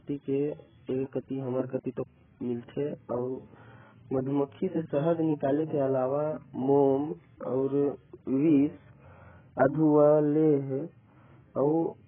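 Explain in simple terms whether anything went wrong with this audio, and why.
Yes, something went wrong: the speech was most likely squeezed hard by AAC compression, a coding scheme that saves space by throwing away the parts of sound it judges least noticeable. Here it was pushed so far that everything above about 3.5 kHz is simply gone for the whole clip. That makes the voice sound dull and muffled, like a poor phone line, with a smeared, warbly, fizzy edge, especially on hissing sounds like s and sh.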